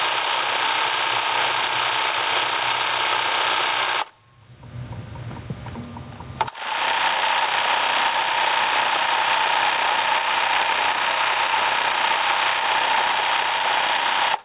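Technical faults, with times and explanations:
Throughout, gain pumping: the gain ducks by around 30 dB under each loud sound, likely from gain set far too high with a fast limiter clamping it. The waveform looks flattened, and the spectrogram's noise floor rises and falls below a 4 kHz ceiling.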